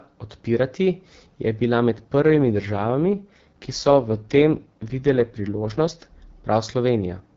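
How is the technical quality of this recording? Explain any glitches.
The recording is wideband phone-call speech with one clear glitch. From 2.17 to 6.04 s, right after "odpirati je bila med", there's an AMR rate drop. The bandwidth holds and nothing cuts out, but the voice goes rough and buzzy. That fits the network pushing the AMR-WB codec down from about 12.65 to 6.6 kbit/s to free bits for error protection on a weak link, before it recovers.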